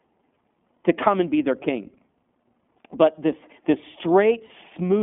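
Throughout, the speech carries iLBC codec coloring: the band is confined to roughly 200 Hz to 3.5 kHz, and the excitation is coded independently in short blocks, consistent with 20 ms frames at 15.2 kbps. The damage is plainly audible as a slightly rough, synthetic texture.

From 4.46 to 4.53 s, about 40 ms of lost iLBC frames, fitting two missing 20 ms frames, were concealed by repeating the last pitch cycle mixed with noise. This is heard as a brief held, buzzy vowel, with the voice returning to normal almost immediately after.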